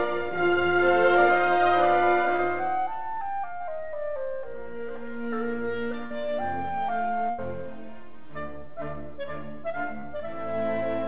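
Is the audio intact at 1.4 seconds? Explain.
Yes, the audio at 1.4 seconds is intact, with no fault at that moment.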